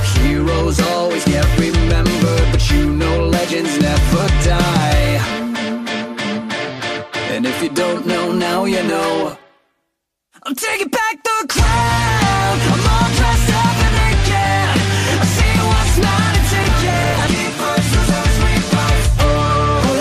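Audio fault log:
9.30 to 9.65 s: processor overload crackle. A quick run of tiny hard-edged silent gaps, each fitting a missed buffer of a few milliseconds, fuses into gritty crackle.
16.56 to 17.31 s: processor overload crackle again, longer and denser. Around thirty missed buffer deadlines each leave a silent gap, heard as tearing grit.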